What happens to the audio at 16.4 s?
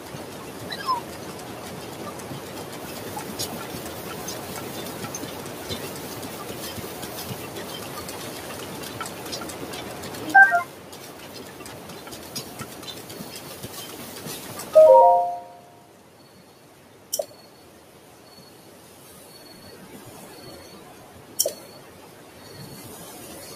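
At 16.4 s, as throughout the clip, a speech-tuned noise suppressor is still running. It mistakes sustained tones, ambience and reverb for noise and turns them down by around 5 dB while attacks pass, so the sound pumps and thins between onsets.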